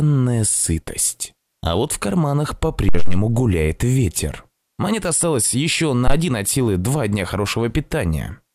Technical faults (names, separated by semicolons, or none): phantom power thump; DAB burbling